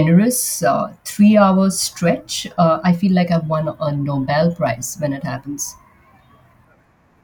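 Speech, with a drift correction step from 5.38 to 6.53 s, right after "when it". Speed and pitch rise together by about 5.5 percent, close to a semitone, then snap back. A clock-matching buffer likely jumped its playback rate.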